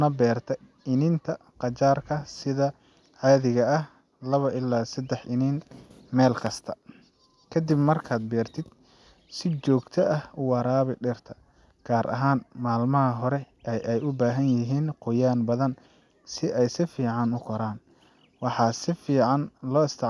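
Listening through the speech, nothing technical stood out at any point.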